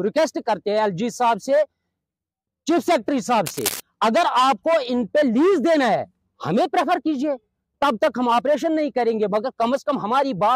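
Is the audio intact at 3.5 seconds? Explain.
No. Cable scratch noise runs from 3.46 to 3.80 s, a burst of rough scratching about 10 dB below the sound. It likely comes from a worn cable or connector being moved.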